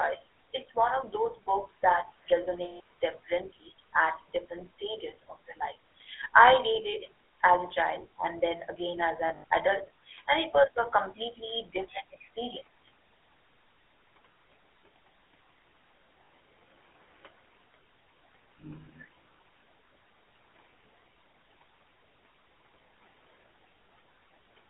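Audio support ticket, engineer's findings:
Speech carried through the GSM full-rate codec for the whole clip. Buzzy, gravelly roughness on every voiced stretch. Band held to roughly 300 Hz to 3.4 kHz, so no air above it. Damage plainly audible. Fits 13 kbps full-rate GSM: a vocal-tract model driven by regularly spaced pulses, excitation kept only at every third sample. Room noise sits about 25 dB under the speech.

Lost GSM frames at 2.64 s, lasting 160 ms. Held, metallic ring. Decoder repeating last good frame's settings.

Lost GSM frames at 9.28 s, between "and then again as" and "adult and it was". Gaps scattered over 160 ms, about a tenth of a second in the longest run. Same rough ring.

Lost GSM frames at 16.24 s, 60 ms. Short metallic smear. Same concealment by frame repetition.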